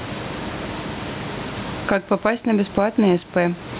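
Gain pumping throughout: gain is likely set too high, so a limiter ducks it around 15 dB on loud speech, and loud and soft parts end up closer in level.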